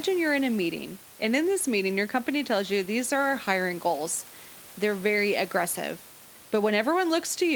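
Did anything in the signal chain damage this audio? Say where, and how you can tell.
No, nothing damaged it.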